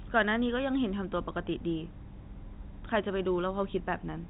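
Nothing stood out on listening to this telephone-band speech.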